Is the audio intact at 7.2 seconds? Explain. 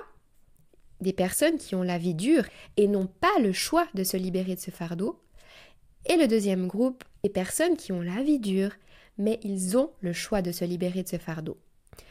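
No. From 7.21 to 7.25 s, between "et le deuxième groupe" and "personnes qui ont la", damaged data in the compressed stream makes the decoder lose frame sync and resynchronise, producing a brief glitch such as a chirp, squawk, click or short hole.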